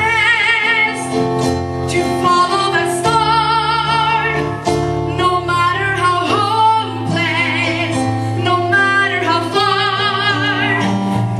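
Listening through, nothing stood out as a technical problem at any point.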